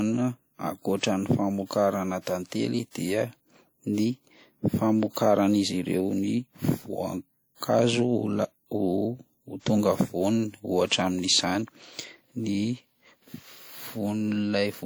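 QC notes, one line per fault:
Throughout, WMA compression: the speech has a ringing, washy quality, with a hiss that swells and fades along with the voice rather than sitting steady underneath it. The damage is plainly audible, and it fits a bitrate around 48 kbps. The likely cause is a transform codec working with long blocks, which smears quantisation noise across tens of milliseconds around each sound and drops weaker spectral detail. Content still reaches about 20.1 kHz.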